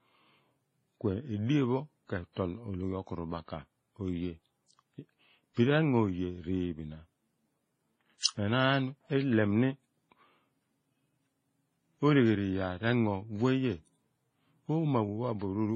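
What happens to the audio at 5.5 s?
Nothing changes specifically at 5.5 s. The speech carries the same layered coding damage heard across the whole clip, most likely transcoding between lossy codecs. The swirly, smeared artefacts of a very low-rate MP3-style encode seem to have been handed to an HE-AAC-style stage and then to WMA 1, each spending bits re-coding the last one's debris and adding its own. Nothing survives above about 16.1 kHz, and the mixed artefacts sit on top of each other.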